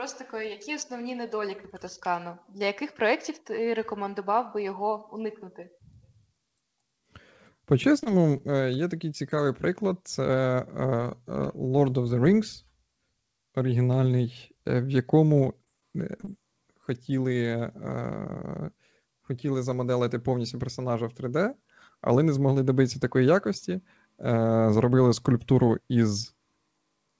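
At 8.00 s comes a short concealed packet loss. About 20 ms of audio never reached the decoder, and the receiver patched the hole with 16 ms of continued sound. It is a brief smear, and a little of the sound is simply gone.

At 8.04 s, right after, comes a short stall from a late packet. The jitter buffer ran dry for 20 ms. The receiver held the last sound until the packet turned up, then resumed where it left off. Nothing is lost. One sound just lingers too long, with a slight buzz.

A second short concealed packet loss falls between 8.37 and 8.51 s. Again 20 ms is missing, filled with 24 ms of extended sound. The patch adds a few milliseconds overall and leaves a quick wobble where the real audio blends back in.

From 15.33 to 16.29 s there is repeated packet loss, and the sound turns robotic. Seven gaps arrive in quick succession. The longest is 23 ms, and about 80 ms is missing in total. 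Patching covers roughly 13% of the stretch, and the audio becomes choppy. Throughout, the call codec leaves nothing above 8 kHz, which fits G.722.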